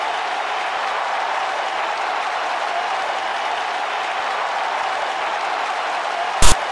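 From 6.42 to 6.52 s, file tags are played as audio: a text tag block decoded as samples produces a loud, one-sided rasp with abrupt, hard edges.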